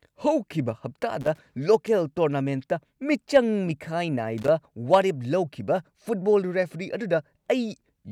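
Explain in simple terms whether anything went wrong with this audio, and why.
Something did go wrong: two short bursts of loose connector crackle. The first runs from 1.21 to 1.39 s, just before "ꯂꯣꯀꯦꯜ ꯇꯣꯔꯅꯥꯃꯦꯟꯠꯇ ꯃꯤꯆꯪ ꯃꯤꯈꯥꯏ", and the second from 4.38 to 4.48 s, right before "ꯋꯥꯔꯦꯞ ꯂꯧꯈꯤꯕ". A worn or dirty plug contact flickers on and off as it shifts, chopping the signal into ragged scratches. Unlike a digital dropout's clean gaps, this crackle is irregular and gritty.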